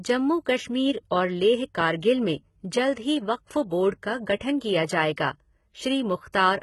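HE-AAC compression is likely behind the damage heard throughout the speech: the treble is rebuilt from copied lower bands rather than coded, so s sounds turn gritty and metallic, nothing survives above 11.8 kHz, and the heavy damage fits a bitrate around 16 kbps.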